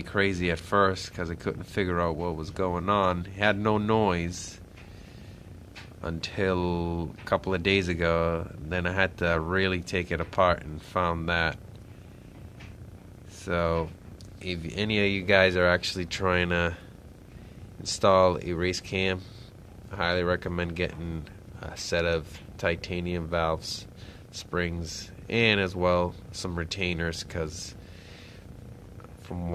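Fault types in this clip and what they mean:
No technical faults can be heard in this recording.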